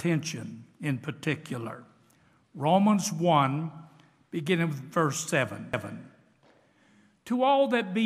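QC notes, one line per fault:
5.73 s, CD skip: a tick and a very brief mute as the laser jumps tracks. Playback then resumes from a different point, so the sound lurches abruptly.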